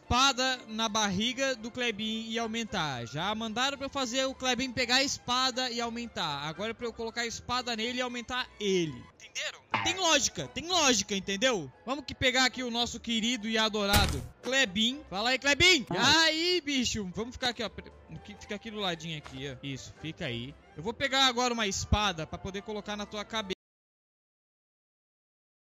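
At 23.53 s the sound cuts off abruptly in mid-flow and never returns, leaving about 2.2 s of silence to the end. This is an audio dropout to silence, likely from the input being lost while the recorder kept writing silence. Unlike a fade-out or a noise gate, there is no tapering and no room tone or hiss beneath it. The level drops straight to nothing, and whatever followed is gone.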